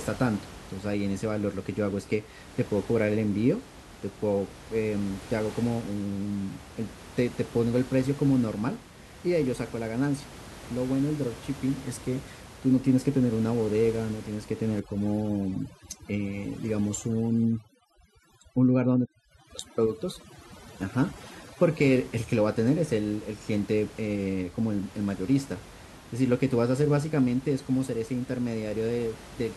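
From 14.80 to 21.82 s the background drops and breaks up into twinkling specks. This is overdone noise removal, with bands near the room-noise estimate, about 18 dB below speech, pushed down along with quiet speech detail.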